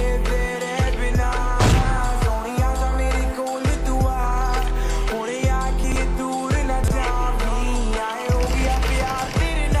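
A 40 ms chunk was delivered late and played out of sequence, two chunks late at 5.84–5.96 s and one late at 6.84–6.92 s. Each chunks out of order event is heard as a brief jumbled stutter.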